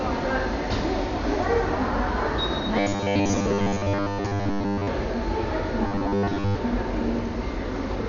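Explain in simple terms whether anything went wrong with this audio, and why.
Something went wrong in two ways. Throughout, the audio was squeezed hard, likely by Dolby Digital compression at a very low data rate. The encoder drops everything above about 7 kHz and fills in detail with noise, so the sound is dull, muffled and rough.

From 2.78 to 4.88 s and again from 5.87 to 6.55 s, fresh audio stopped arriving in time, likely causing robotic sound from repeated short buffers. The playback kept looping tiny slices, about 10 ms each, while most of the real audio was skipped. That loop forces a steady 100 Hz metallic buzz onto the sound.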